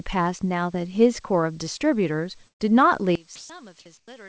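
A speech recording carried over a call path whose coding leaves nothing above 8 kHz, with four faults. A burst of packet loss from 2.48 to 2.62 s drops about 120 ms of audio. The receiver stretches the last sound and fades it, so a held, dying tail stands in before the speech resumes further along with that stretch missing. From 3.15 s to the end, one channel inverted is the likely cause of the sound collapsing by about 20 dB: with reversed polarity on one side, the shared centre content cancels in the mono sum and leaves only a faint residue. Between 3.36 and 3.50 s, sound dropped by the voice detector is likely, as the sender judged the sound to be background and stopped transmitting. About 130 ms of sound is lost under 140 ms of steady comfort noise. From 3.98 to 4.08 s, comfort noise in place of the background likely comes from discontinuous transmission during a pause. For 100 ms the real background, already about 37 dB below the loud passages, gives way to a flat, featureless hiss about 16 dB quieter.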